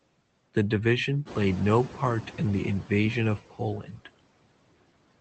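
Noise suppressor artifacts run through the whole speech clip. The suppressor pulls down bands it judges to be steady noise by about 18 dB, frame by frame, so the background sinks in pauses and swells under speech.

From 1.25 to 2.75 s the noise suppressor is catching up. The room noise jumps by about 14 dB around 1.5 s, and the suppressor's noise estimate trails it. Early on, the louder background gets only about 8 dB of reduction before sinking over roughly 1.5 s as the estimate adapts.

From 3.8 to 4.08 s, speech is cut by the noise suppressor, which mistakes part of the speech for background. Across about a fifth of a second, the affected sounds dip by up to about 12 dB and come across as swallowed or faint. The call path's band limit, which fits Opus coding with an 8 kHz audio bandwidth, can be heard as missing top end.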